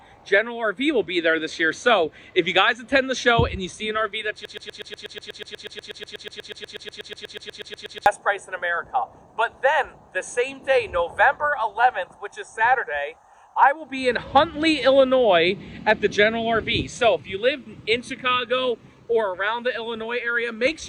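At 4.45 s the audio locks into a broken-record loop until 8.06 s. A 122 ms fragment repeats exactly, back to back, about thirty times. The likely cause is a stalled player or stream resending its last buffer, so those seconds of audio are lost.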